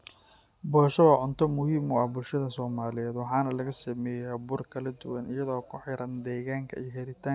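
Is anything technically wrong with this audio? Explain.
No, nothing technically wrong can be heard in this speech recording; the signal stays steady and intact throughout, with no audible faults.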